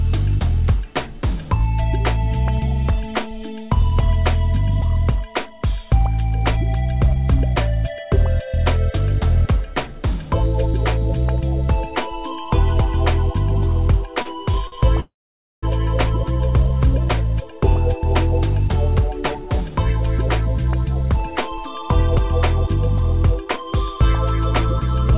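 From 14.02 to 14.74 s there are repeated stalls, a stutter. Packets kept arriving late, so the jitter buffer ran dry four times, and the receiver extended the last sound to cover each wait. About 100 ms in total was filled this way, roughly 14% of that stretch, with the longest hold lasting 47 ms. Nothing is lost, but the audio catches and drags in small hitches.

At 15.0 s a call audio freeze follows, lasting until 15.65 s. The likely cause is packets held up in transit, which left the buffer empty for 625 ms. The sound carries on briefly as a continuation of what came before, then falls silent for about 520 ms. When playback resumes it picks up where it stopped, so nothing is missing, but a gap has been inserted and everything afterwards runs 625 ms later.

Two jitter buffer speed-ups come next, as the receiver trims a buffer holding more audio than it aims for by cutting out tiny pitch-period slices many times over. 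From 17.40 to 22.68 s the audio plays at 103% with pitch unchanged, losing about a fifth of a second. That rate sits just under the point where it starts to sound hurried. From 23.29 to 23.97 s it runs at 109%, dropping under a tenth of a second, and here the rush is audible.

Throughout, the call path's band-limiting is audible, with nothing above 4 kHz. This points to a G.711 mu-law codec at 64 kbps.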